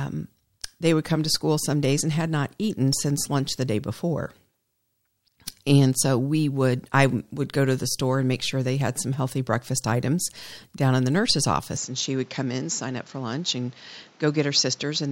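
At 11.77 s, right after "down in the nurse's", the speech turns duller and slightly quieter with no gap. The input was likely switched to a poorer device, which held until the end at 15.12 s. On a spectrogram, everything above 7.6 kHz vanishes abruptly, and a new noise floor appears roughly 30 dB under the speech. The waveform shows the envelope shrinking by about 5 dB at the same instant.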